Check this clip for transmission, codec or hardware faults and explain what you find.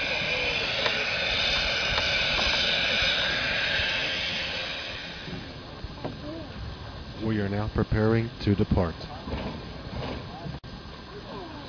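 No faults detected.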